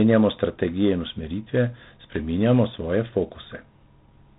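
From start to finish the speech carries a harsh, rasping hiss that swells and fades with the speech level, and everything above about 3.8 kHz is missing, leaving a narrow telephone tone. This is G.726 ADPCM damage: each sample is sent as a few bits of difference from an adaptive prediction, and with too few bits the prediction error becomes audible grain. The roughness suggests 24 kbit/s rather than the cleaner 32 kbit/s rate.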